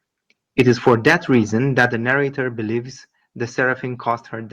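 Microphone overload is heard in this speech clip from 0.59 to 1.37 s and again from 1.78 to 1.85 s, just before "the narrator". The loudest peaks run about 5 dB and then about 4 dB past the converter's limit and have their tops flattened, giving a harsh, crackly edge to a small share of the waveform, a few percent at most. The likely cause is input gain set too high, so the converter runs out of range. Microphone volume stepped down is heard at 0.89 s, at 1.89 s just before "the narrator", and at 4.11 s. Voice and background fall together by about 2, 4 and 2 dB, each in one abrupt step. The first two steps come during or just after the distorted stretches, which points to the call software likely reacting to the overload by cutting the device's input volume.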